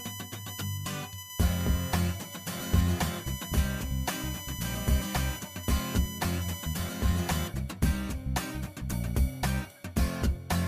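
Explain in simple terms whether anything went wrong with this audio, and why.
USB whine from 0 to 7.48 s: a fairly loud, steady high-pitched tone at 1 kHz, strongest at 3 kHz, caused by the computer's USB connection pulsing current into the audio's power.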